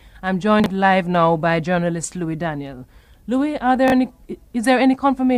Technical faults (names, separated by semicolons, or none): chunks out of order